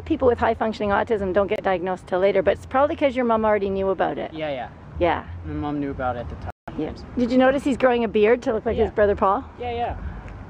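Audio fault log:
1.56–1.60 s and 6.50–6.69 s, Bluetooth stall: playback drops to silence for about 24 ms, then about 172 ms, and resumes where it stopped. Interference likely delayed packets, so the headphones' buffer emptied and output halted until retransmitted data arrived.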